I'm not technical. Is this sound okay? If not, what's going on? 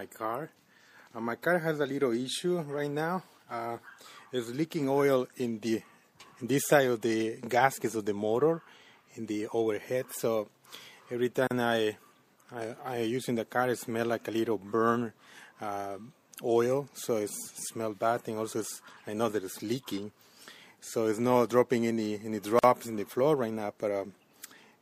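No. Throughout, the sound is plainly watery and swirly, with dull treble and smeared attacks, most likely from heavy MP3 compression squeezing the file down. There are also two tiny dropouts, at 11.47 s (about 36 ms) and 22.59 s (about 46 ms), each a gap at a join of encoded pieces, where separately saved chunks were stuck together with a sliver of silence left in.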